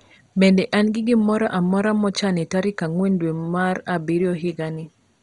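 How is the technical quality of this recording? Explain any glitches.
The technical quality is poor, with one fault running throughout. The speech has likely passed through heavy MP2 compression, starved of bits, which fits a low rate of around 56 kbps. Layer II divides the spectrum into 32 sub-bands and shares out too few bits, so upper bands shut off entirely, leaving nothing above 11.2 kHz, while the surviving bands are coarsely quantised, giving a dull, gurgling, granular sound.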